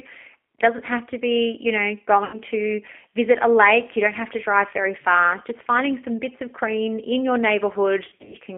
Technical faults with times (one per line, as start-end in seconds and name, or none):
0.00-8.58 G.729 codec
2.25-2.39 VoIP packet loss concealed by the speech codec
8.08-8.36 VoIP packet loss concealed by the speech codec